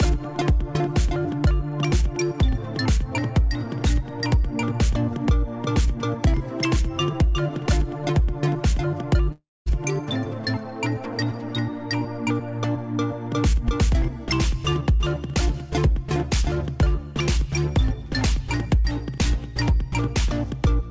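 From 9.32 to 9.68 s the sound smears into a fading buzz, then silence, likely from a long network dropout that lost about 0.34 s of audio.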